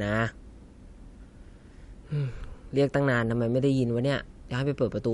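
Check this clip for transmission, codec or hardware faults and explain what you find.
The clip shows one fault, MP3 compression, present for its whole length. The sound was likely squeezed through an MP3 encoder starved of bits, which fits a low bitrate near 48 kbps. Short of budget, the encoder removes all treble above a fixed cut-off, here about 11.1 kHz, and drops weaker frequency lines that flicker in and out between frames. The speech sounds dull and clearly watery, with swirling on s sounds and softened consonant attacks.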